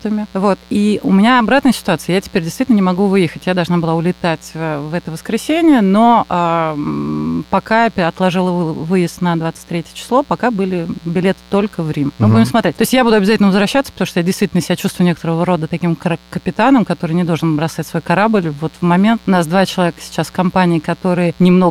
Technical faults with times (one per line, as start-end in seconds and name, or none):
0.00-21.70 mains buzz